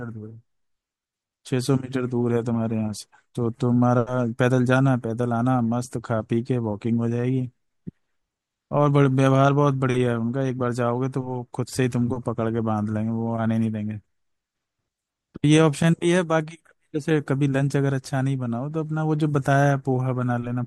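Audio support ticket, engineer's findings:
No audible faults found.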